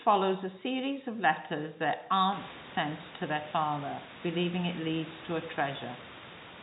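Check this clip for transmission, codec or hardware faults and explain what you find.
The speech reaches the listener in the narrow telephone band of G.711 mu-law coding, with nothing above 4 kHz and the codec's quantisation hiss only faint, while the room noise rises by about 17 dB at roughly 2.5 s and then stays about 15 dB under the voice, which is part of the recording itself and not something the transmission chain introduced.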